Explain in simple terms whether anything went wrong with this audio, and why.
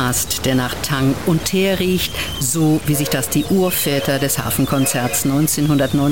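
Something did go wrong, and it lasts the whole clip, from the first second to the last. The sound carries a harsh, buzzy roughness, and even the quiet gaps are filled with a fairly noticeable hiss. This is likely a stuck bit, where one digit in the stored numbers is frozen. Unlike ordinary clipping, which only roughens the loudest moments, this fault also fills the quiet passages with noise.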